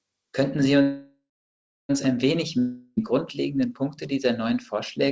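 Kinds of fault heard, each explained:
Call audio freeze: from 0.82 to 1.91 s the last sound is stretched into a fading buzz, then about 0.67 s of silence, likely from held-up packets draining the jitter buffer. The spectrogram shows a smeared, dimming band, then blank; speech resumes intact at "ein wenig".
Long network dropout: just after "ein wenig", from 2.59 to 2.99 s, a fading hiss fills about 0.38 s, likely from packets that never arrived, and about 0.38 s of speech is gone. The waveform shows a decaying tail, then a cut back into later speech with no silent gap.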